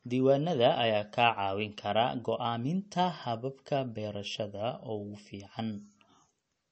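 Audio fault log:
Throughout, MP3 compression: treble stops sharply near 8.3 kHz and the speech sounds watery and swirly, likely from low-bitrate MP3 encoding around 34 kbps.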